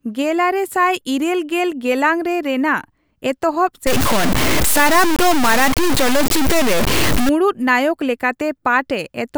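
Speech, with a stretch from 3.87 s to 7.29 s that turns harsh and grainy. Through that section the distortion tracks the voice itself, roughening the voice, and the quieter tails break up into sputtering or drop out entirely, with the error sitting at roughly the same level as the speech. The likely cause is low bit depth without dither: the audio was truncated to about 3 bits, so rounding error follows the signal instead of forming a steady noise floor.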